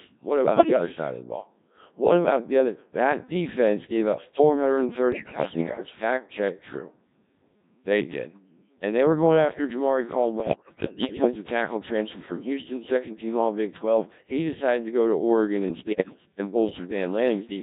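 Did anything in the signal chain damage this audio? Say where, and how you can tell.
Yes. The codec stage is the main culprit: the speech has been through the Codec 2 vocoder, and the density of the sound fits its 1.3 kbit/s mode. Only pitch, voicing, energy and a coarse spectral envelope survive, and the decoder rebuilds the voice from a bank of sine waves rather than the original waveform. Across the whole clip that leaves heavily damaged, robotic, buzzy speech with a synthetic timbre.

The second fault is bit errors on digital voice radio, from the transmission path, in four bursts: 0.53 to 0.86 s, 5.12 to 5.86 s, 10.40 to 11.27 s and 15.68 to 16.26 s. At a rate this low, every corrupted bit alters a whole frame's pitch, level, voicing or spectral shape. In these stretches the voice lurches in pitch and loudness, its tone colour flips abruptly, and it breaks into warbling, bleepy gibberish. 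The errors point to a weak link, worst in the first burst.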